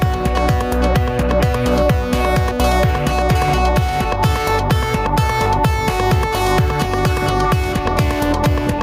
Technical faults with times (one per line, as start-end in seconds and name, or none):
0.00-8.82 gain pumping